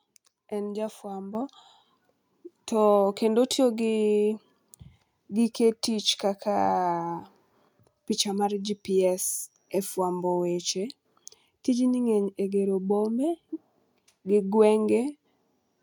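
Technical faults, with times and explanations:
1.35 s, microphone volume stepped up: the speech and the background jump together by about 7 dB in one step as the call software raised the device's input gain.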